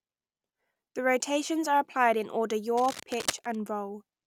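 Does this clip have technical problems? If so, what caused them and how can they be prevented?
Yes. From 2.77 to 3.56 s, just after "are applied in order", a dense, uneven scratching rustle sits over the speech, only about 10 dB below it. This is cable scratch noise, likely from a worn cable or connector being moved so its contact resistance fluctuated rapidly. Replacing worn leads and securing cables so they cannot shift during recording prevents it.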